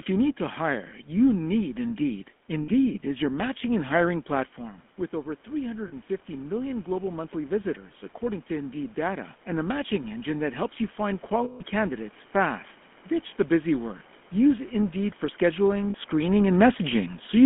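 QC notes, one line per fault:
throughout: GSM full-rate codec. The sound is buzzy and gravelly, with a coarse roughness on voiced sounds and a narrow, telephone-like band of roughly 200 Hz to 3.4 kHz. This comes from the early GSM coder, which models the vocal tract and drives it with a sparse, regularly spaced pulse excitation. The result fits a 13 kbps full-rate stream, and the damage is plainly audible.
2.62–2.69 s, 5.88–5.93 s, 11.44–11.62 s, 15.90–15.95 s: lost GSM frames. Each gap is filled by a rough, metallic ringing hold instead of a clean dropout. The decoder repeats the last good frame's settings at a falling level to cover the missing frames. The gaps last 60 ms, 40 ms, 160 ms and 40 ms. The 160 ms gap rings longest. The last gap comes just after "for scheduling".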